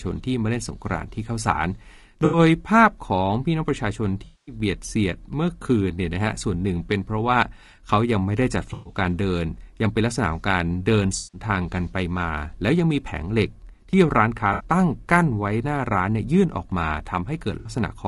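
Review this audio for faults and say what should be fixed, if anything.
Low-delay AAC compression runs throughout: the speech sounds rough and grainy, with noise between harmonics. The likely cause is AAC-ELD's short frames starved at roughly 32 kbps. Raising the bitrate, or using a longer-frame codec where delay allows, would prevent it.

AAC frame loss with concealment occurs at 2.25, 4.25, 8.73, 11.17, 14.53 and 17.59 s. The decoder bridges 60 to 220 ms gaps from the last good spectrum, leaving smeared, noisy patches. Adding forward error correction or a more reliable transport would prevent it.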